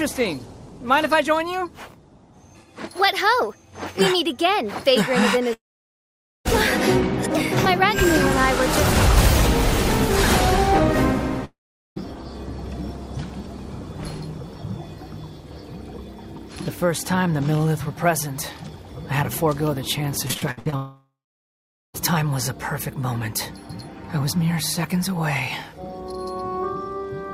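At 5.53 s the audio cuts out until 6.47 s, a long network dropout. The last sound smears on briefly as a fading buzz before about 0.86 s of silence, and playback resumes with roughly 0.92 s of material missing. This is likely the stream stalling at the receiver, which pads the hole with an extension of the last frame. A shorter repeat runs from 11.45 to 11.98 s: about 0.52 s is lost, and about 0.42 s of it is silent.

From 20.28 to 20.74 s there is repeated packet loss, giving a robotic sound. The passage turns choppy and robotic, which fits around half a dozen short holes, the longest about 65 ms, each patched by continuing the previous sound. Nearly half of that half-second is concealed rather than real audio, so pieces of content are audibly absent. It runs straight into a third dropout at 20.76 to 21.96 s. About 1.18 s is missing there, including roughly 0.82 s of silence after the concealment tail fades.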